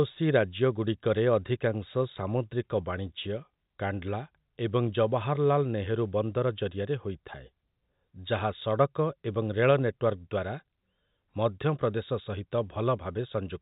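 No technical faults are audible.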